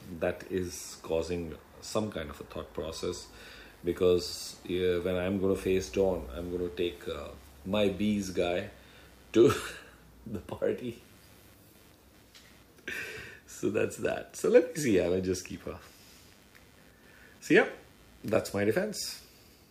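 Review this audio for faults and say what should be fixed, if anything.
Computer activity noise runs through the whole clip as a faint buzzing chirp, pulsing at roughly a hundred times per second and sitting around 35 dB below the sound. Processor or graphics load shifts the shared ground, so the interference follows the computer's activity rather than the audio. On a spectrogram it appears as a comb of evenly spaced vertical striations across the high band; the waveform shows small regular spikes riding on the signal. Fix it by using an external or isolated audio interface, adding a ground-loop isolator, or keeping the recording chain's ground separate from the computer's.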